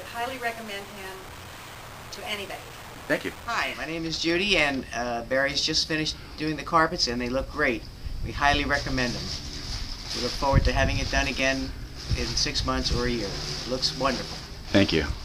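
From 3.06 to 4.35 s and again from 4.76 to 7.86 s, a jitter buffer speed-up shortens the audio by about 100 ms and then about 200 ms. Short pitch-period segments are cut repeatedly, so the sound runs 7% and then 6% fast at unchanged pitch and feels hurried.

Between 10.38 and 14.46 s, periodic USB or driver dropouts recur every 1.02 s, about five in all. Each time a stalled bus or driver skips roughly 2 ms of audio outright, leaving an evenly spaced tick.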